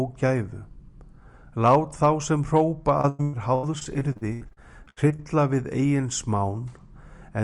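Recording of sounds with repeated packet loss from 3.01 to 5.20 s: dropouts up to 103 ms, with about a third of that span patched with repeated sound, leaving choppy, robotic audio.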